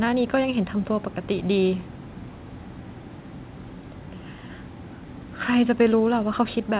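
There are no technical faults to describe in this speech; the sound simply stops at about 4 kHz, as expected from a narrowband call path consistent with G.711 mu-law.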